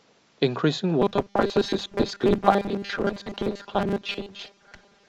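From 1.02 s to the end, the speech collapses into robotic sound from repeated short buffers: a rigid metallic buzz at 200 Hz, likely from a 5 ms block being replayed for most of the audio. A spectrogram shows evenly spaced 200 Hz harmonics; the waveform shows identical repeating cycles.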